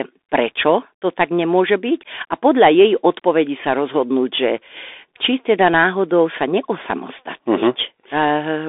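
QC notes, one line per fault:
Throughout: Bluetooth CVSD headset codec. The speech passed through a narrowband headset link whose one-bit-per-sample delta coding points to the 64 kbps CVSD scheme, and its adaptive step size cannot keep up with fast, loud high-frequency movement. The line band runs from about 250 Hz to 3.6 kHz, with nothing above 3.8 kHz, so the speech sounds boxed-in and thin. S sounds come out scratchy, and a grainy hiss sits under the voice, plainly audible.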